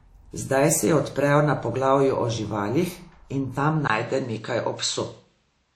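Right from the start the whole speech clip carries plainly audible codec damage, most likely WMA compression. Long transform blocks smear quantisation noise across tens of milliseconds, giving a ringing, washy hiss that breathes with the voice. Nothing survives above 16.3 kHz, which fits a low bitrate around 48 kbps.

Then at 3.88 s, right after "o živalih in tam", there's a 20 ms gap and the sound turns duller, with nothing above 8.1 kHz through to the end. That's likely an input switched to a poorer device. Loudness stays about the same, and a new noise floor sits well below the speech.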